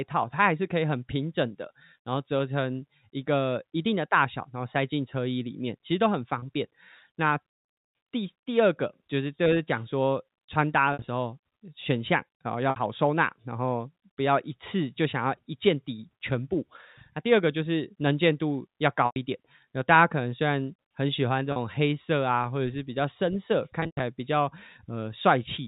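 Packet loss with pitch repetition hits at 6.39, 10.93, 12.70, 19.06, 21.52 and 23.80 s. The receiver loops the last pitch period to bridge 30 to 160 ms of lost audio over the band-limited G.711 telephone sound. Short ones buzz briefly, and the longest ones fade toward silence.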